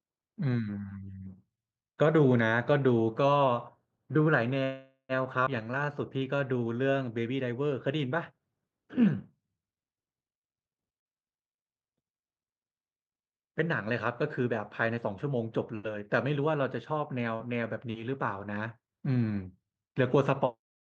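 At 4.63 to 5.12 s comes a call audio freeze, likely from delayed packets draining the jitter buffer. The last sound stretches into a fading buzz, with about 90 ms of silence at the end. Speech then resumes where it stopped. A spectrogram shows smeared horizontal bands thinning to blank.

At 5.45 to 5.49 s a skip ahead drops roughly a tenth of a second. The two sides are spliced almost directly, leaving an abrupt discontinuity in the waveform.

From 5.64 to 6.91 s a jitter buffer slow-down plays speech at 92% speed by repeating pitch periods, adding 116 ms. Sounds are drawn out at unchanged pitch. Harmonics stay level but stretch in time.

At 11.00 to 11.07 s, short concealed packet loss fills 41 ms of an 80 ms hole with continued sound, heard as a brief smear. The same fault recurs at 17.36 to 17.42 s, with 36 ms covering 40 ms lost. Each shows as a short blurred patch in the spectrogram.

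At 19.16 to 19.74 s a jitter buffer speed-up runs at 111% speed, removing roughly 70 ms in short cuts. The passage sounds hurried at the same pitch, with compressed syllable spacing on the waveform.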